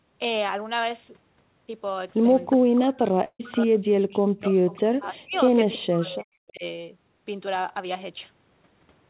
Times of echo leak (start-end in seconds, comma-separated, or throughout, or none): 4.72-4.78